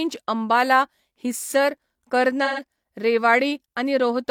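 From 2.44 to 2.62 s, AAC frame loss with concealment. The decoder rebuilt missing audio from the last good spectrum. It sounds smeared and noisy, fitting about three lost frames.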